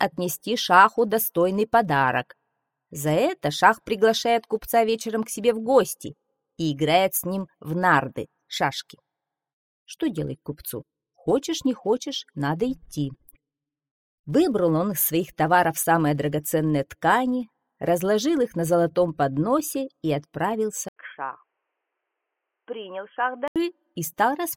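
The audio runs on its original input until 20.88 s, when an 80 ms gap of silence gives way to a dull, boxy sound with nothing above 3.3 kHz, a level a few decibels lower, and a different background noise sitting about 55 dB below the signal. This lasts until 23.56 s. The sudden narrowing, level drop and change of noise character at a clean break point to an input switched to a poorer device, likely a fallback microphone or a headset call profile.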